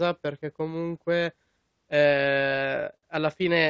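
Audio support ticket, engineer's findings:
Stutter, 2.42–3.05 s: sound drags and hiccups in five short stalls, longest 56 ms, about 107 ms stretched in total, roughly a sixth of that span, nothing dropped. Repeated stalls (stutter) from the jitter buffer running dry as packets arrived late. Receiver extended the last sound to bridge each gap. Call path band-limited at 8 kHz, consistent with G.722 at 64 kbps.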